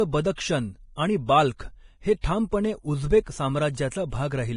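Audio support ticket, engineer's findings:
Hissy, grainy speech with blurred consonant onsets, throughout. Nothing above 10.6 kHz. Likely heavy Vorbis compression: coarse treble quantisation turns fine detail into noise-like grain, consistent with a low bitrate around 30 kbps. Roughened tonal quality on vowels.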